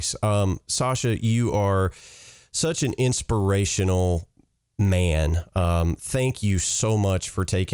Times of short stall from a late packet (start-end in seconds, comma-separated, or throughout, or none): none